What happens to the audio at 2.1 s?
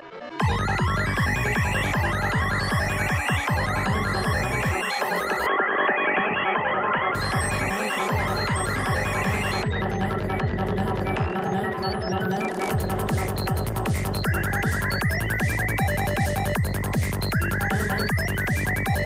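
Nothing goes wrong at 2.1 s; the audio plays through that moment intact, with no dropout, click or distortion.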